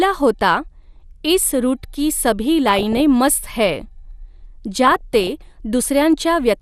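MP2 compression runs through the whole speech clip and is plainly audible, likely from MPEG Layer II coding. Too few bits leave upper sub-bands dropped or flickering and the rest coarsely quantised, giving a dull, gurgling, granular texture that points to about 80 kbps.

DAB burbling strikes from 2.68 to 3.00 s, just after "इस रूट की सभी", and again from 4.85 to 5.27 s. Bit errors, at a low rate well under one percent, corrupt samples and scale factors, putting short blips of noise into single sub-bands and making individual sub-bands jump in level for up to a frame.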